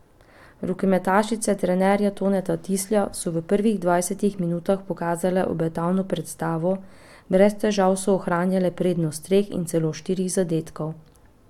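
Speech recording with no audible technical faults.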